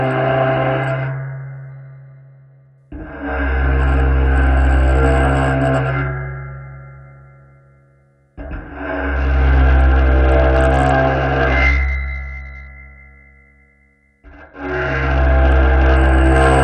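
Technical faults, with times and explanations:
1.70–2.78 s, 9.16–12.68 s, 14.25–15.96 s: Bluetooth SBC bit pool drop. Treble dulls and gritty noise rises as starved sub-bands are coarsely quantised, which fits the bit pool falling from 28 to 8, near 72 kbps.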